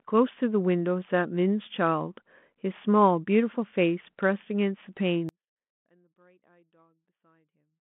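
Telephone-band speech, its narrow band and light coding noise consistent with 32 kbit/s G.726 ADPCM, suffers an audio dropout to a faint residue at 5.29 s. The speech cuts out abruptly and only a faint sound, roughly 40 dB down, remains to the end, likely a lost signal on a path that stayed live.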